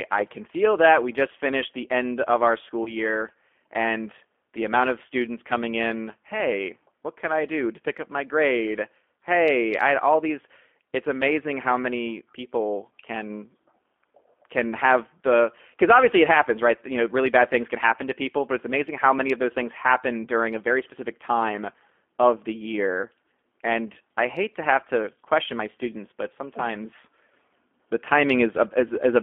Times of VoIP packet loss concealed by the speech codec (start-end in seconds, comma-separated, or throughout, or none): 2.84-2.96, 28.88-28.95